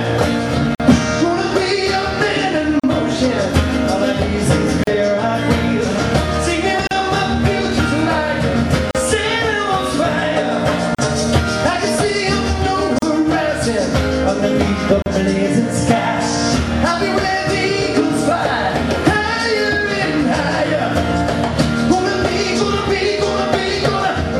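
Silent gaps at joins of encoded pieces open at 0.75, 2.80, 4.84, 6.87, 8.91, 10.95, 12.99 and 15.02 s, the first 48 ms and the rest 38 ms. Untrimmed encoder delay and last-frame padding leave silence at each seam. Unlike a dropout, nothing is lost, and the sound resumes exactly where it stopped, with steady two-second spacing.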